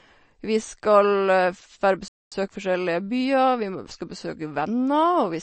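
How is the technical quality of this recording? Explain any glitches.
Technical quality is poor: the speech carries plainly audible coding damage throughout, and one break interrupts it partway through.

Across the whole clip, the sound is watery and swirly, which fits MP3 compression at a low bitrate around 35 kbps as the likely cause. Starved of bits, the encoder drops the treble and toggles weak frequency lines. A spectrogram shows a hard ceiling and flickering patches.

From 2.08 to 2.32 s the speech stops dead for about 0.23 s. A playback stall is the likely cause: the player ran out of data or was blocked, so output went silent until it recovered. The waveform shows a flat gap cutting the signal mid-flow.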